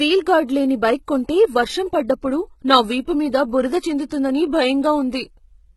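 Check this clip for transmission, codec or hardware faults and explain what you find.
Two codec problems here. Throughout, there's heavy codec damage and nothing above 11.8 kHz, with the treble rebuilt from copied lower bands, likely HE-AAC compression at a low bitrate, around 16 kbps. At 4.1 s there's pre-echo: block-spread quantisation noise leaks about 12 ms ahead of an attack, leaving a brief hiss and a smeared onset.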